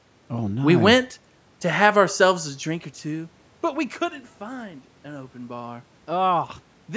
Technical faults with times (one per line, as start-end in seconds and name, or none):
none